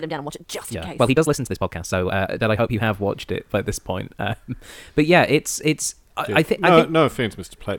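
From the start to about 2.82 s the speech runs at about 1.6 times its normal pace while the pitch stays put, which sounds rushed. This is a time-stretched section, likely squeezed by software dropping short pieces. Normal pace returns at "watched it by this".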